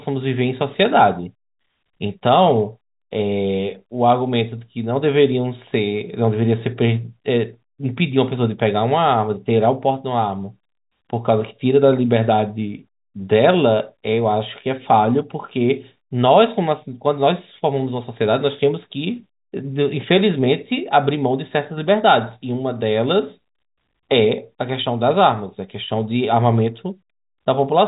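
No technical faults can be heard in this speech.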